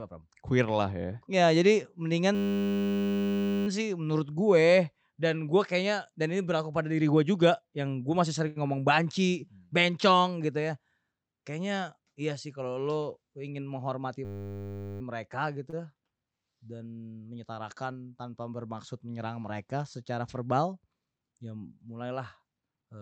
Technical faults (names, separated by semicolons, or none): system hang loop; short stall from a late packet; jitter buffer speed-up